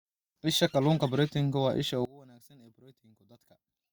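A speech recording in which, from 2.05 s to the end, one stereo channel was likely inverted in polarity, so the matching centre content cancels when the channels are summed to mono. The voice drops by about 26 dB, leaving only a faint residue.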